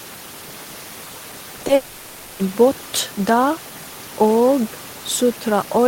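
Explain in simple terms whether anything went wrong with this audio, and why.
Yes, two things went wrong. First, short concealed packet loss: three small pieces of audio arrived too late, at about 1.57, 1.61 and 1.67 seconds. The receiver patched each gap by stretching the sound just before it, so you hear quick smears or wobbles there.

Right after that comes a long network dropout, likely from the connection stalling, from 1.75 to 2.41 seconds. For over half a second, the receiver filled the gap with a fading buzz or hiss made from the last sound. The real audio resumes at "båt der", and what was said during the gap is lost.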